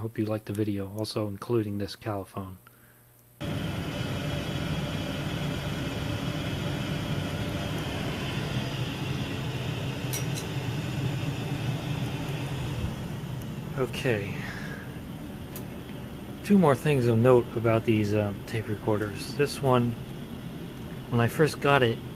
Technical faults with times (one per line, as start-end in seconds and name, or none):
none